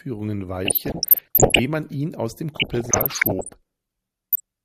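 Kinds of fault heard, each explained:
DAB burbling: Weak digital radio reception lets bit errors slip past error correction into the MP2 audio. Corrupted samples put short blips of noise in single sub-bands, and corrupted scale factors make sub-bands leap in level for up to a frame. Here the speech burbles from 0.65 to 1.59 s, just before "man ihn aus dem", and again from 2.54 to 3.54 s, just after it. A brief burst of burbling follows at 4.32 s. The density suggests an error rate of around one percent.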